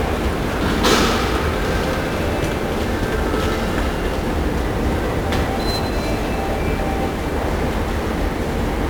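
1-bit DFPWM compression runs through the whole clip, from start to finish. Each sample is reduced to a single bit that only tells an adaptive level to rise or fall, so the waveform is traced as a jagged approximation rather than reproduced. The damage here is heavy: a dense, broadband fuzz and crackle sits on every sound, and the treble disappears under hiss. This is consistent with a one-bit stream of about 48 kbps.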